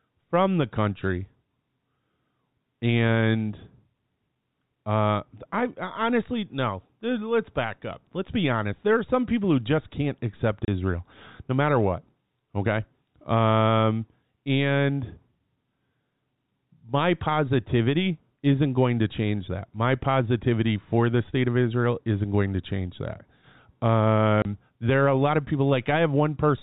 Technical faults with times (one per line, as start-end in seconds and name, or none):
10.65-10.68 packet loss filled with silence
24.42-24.45 packet loss filled with silence